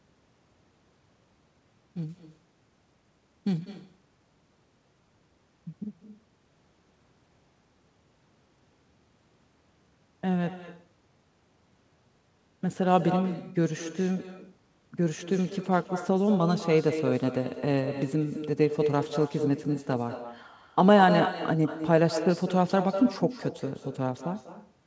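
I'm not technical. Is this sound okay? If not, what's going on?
No. Throughout the recording you can hear echo with no canceller. Each phrase of speech is followed about a fifth of a second later by a clearly quieter, thinner copy of itself. The person on the other end was likely playing the call through a loudspeaker, and their microphone picked it up and sent it back, with nothing in the call removing it. The call audio itself tops out at 8 kHz, which is normal for this kind of connection.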